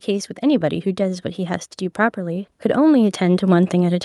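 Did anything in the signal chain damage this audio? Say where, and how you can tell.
Yes, at the call-processing stage: automatic gain rising from 1.96 s to the end. Voice and background noise swell together over roughly two seconds as the gain control lifts a signal it judged too quiet. On the waveform, the envelope and noise floor climb steadily in step.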